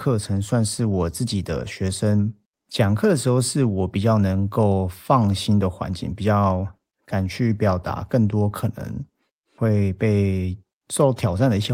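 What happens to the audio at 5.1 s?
Nothing goes wrong at 5.1 s; the speech continues intact through that moment, with no dropout, click, distortion or level change.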